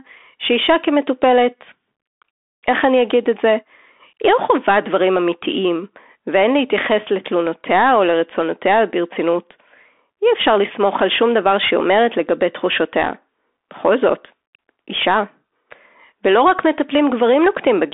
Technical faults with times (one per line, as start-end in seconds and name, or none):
0.00-17.93 Bluetooth CVSD headset codec